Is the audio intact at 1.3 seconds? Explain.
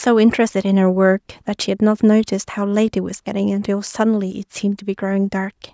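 Yes, the speech at 1.30 s is intact, with no dropout, click or distortion, only the expected narrower sound of call microphone processing, which leaves nothing above 8 kHz.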